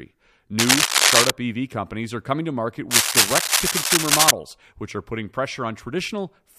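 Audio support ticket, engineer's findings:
Cable scratch noise, 0.59–1.31 s and 2.90–4.31 s, about 10 dB then about 5 dB above speech; likely a worn cable or connector flexing, contact resistance jumping. Spectrogram: ragged broadband smears; waveform: dense spiky bursts.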